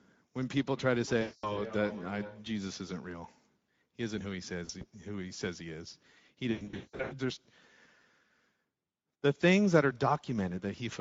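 Throughout, the speech carries Speex codec damage: a hoarse, grainy texture where too few bits describe the excitation. On a spectrogram, harmonics look smeared and noisy, and the character fits a middle setting near 16.8 kbps rather than a clean wideband rate.

From 0.74 to 2.56 s, feedback echo between two devices appears. A second device replays this microphone's signal, which is picked up again. Each syllable returns roughly every 0.4 s, peaking about 14 dB below the speech, thinner each pass. A waveform shows evenly spaced, shrinking copies.

VoIP packet loss concealed by the speech codec hits three times. From 1.21 to 1.61 s, 220 ms is lost, consistent with about eleven frames. The decoder stretches the last pitch and filter into a buzzy tone or coloured noise that fades. From 4.65 to 4.84 s, 60 ms goes in short gaps up to 40 ms. From 6.51 to 7.14 s, 460 ms goes across 600 ms, with one 180 ms run. 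Spectrograms show flat, repeated harmonic bands dimming, then weak, distorted speech recovering afterward.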